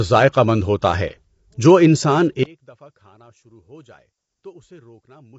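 A speech clip with plainly audible codec damage throughout: the voice is rough and grainy, with noise filling the gaps between harmonics and nothing above 7.8 kHz. This is likely low-delay AAC compression (AAC-ELD), at a rate that fits around 24 kbps. From 2.43 s to the end, the level drops by about 30 dB. The likely cause is one channel inverted: a stereo source with reversed polarity on one side, so the shared content cancels in the mono sum and only the residual mismatch remains.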